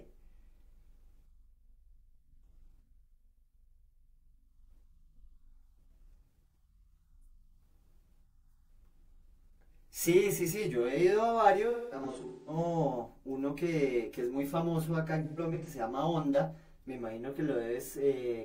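From 11.70 to 12.58 s, and again from 15.24 to 15.68 s, there is AAC frame loss with concealment. The decoder rebuilds missing frames from earlier spectrum. The result sounds smeared and noisy.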